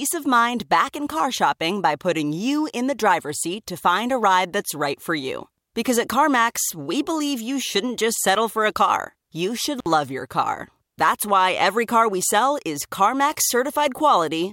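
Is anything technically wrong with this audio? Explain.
Yes. At 9.79 to 9.86 s, between "a car you should" and "your car", an intermittent contact briefly opens the line for about 56 ms. The speech cuts out with crackle at each edge and faint hiss between, unlike a clean digital dropout.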